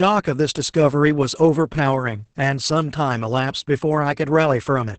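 Across the whole clip the speech carries Opus voice compression, heavy enough that nothing survives above about 8.7 kHz. The codec runs in its wideband linear-prediction (SILK) mode and codes the excitation coarsely, so the voice sounds muffled, hoarse and faintly robotic, which fits a bitrate around 10 kbps. A simple low-pass filter would dull the top without roughening the voice, and MP3-style damage would swirl instead.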